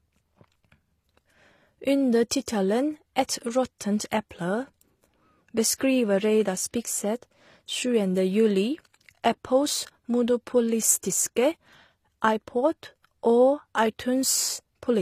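Throughout the speech, transcoding between lossy codecs likely stacked one AAC encode on another, blending two layers of artefacts and leaving nothing above 14.9 kHz.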